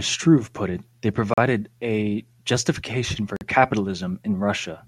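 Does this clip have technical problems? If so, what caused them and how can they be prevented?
Yes. Dropouts like these are likely a Bluetooth stall: radio interference delays packets, the headphone buffer empties, and playback halts until the resent data arrives. The speech cuts to dead silence for 40 ms at 1.34–1.38 s, between "put it they" and "a justification for", and for 46 ms at 3.36–3.41 s, right after "a justification for", then resumes. Keeping the phone close to the headphones, away from Wi-Fi routers and other 2.4 GHz sources, prevents this.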